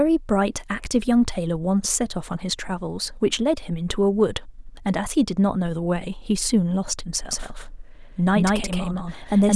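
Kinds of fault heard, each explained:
Doubled audio track: the speech is likely captured a second time through a slower path, so two copies are mixed. From 7.31 s to the end, a full-band copy at about equal level trails roughly 150 ms behind, starting abruptly, with no decay or room colour.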